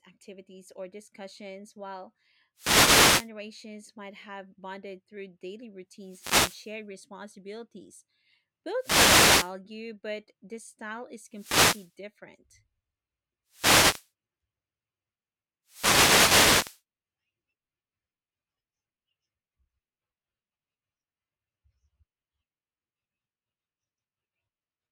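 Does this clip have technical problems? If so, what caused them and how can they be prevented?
Yes. Six wireless microphone noise hits break through the speech: at 2.55–3.30 s (right after "activities or discussions while"), 5.99–6.77 s, 8.78–9.54 s (just before "but the style is"), 11.30–11.95 s (just after it), 13.49–14.10 s and 15.65–16.82 s. Each time the FM radio link fades as reflected signals cancel, and receiver hiss swells into a swish of static. On a spectrogram these show as broadband vertical noise bands, and in the waveform as raised, fuzzy stretches. Preventing them means using diversity receivers, keeping a clear line of sight, and placing antennas close to the performer.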